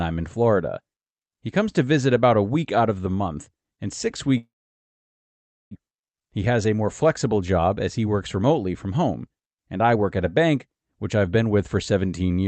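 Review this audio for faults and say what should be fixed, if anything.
From 4.37 to 5.77 s, after "the month and six", the sound smears into a fading buzz, then about 1.2 s of silence. This is likely a long network dropout, with roughly a second of audio never arriving. Prevent it with redundancy or forward error correction and a more stable network route.

From 5.84 to 10.03 s, before "at a bank which", speech runs about 8% faster at unchanged pitch. This is a jitter buffer speed-up, trimming pitch periods to shed roughly 0.3 s of built-up delay. Prevent it by smoothing packet delivery so the buffer never overfills.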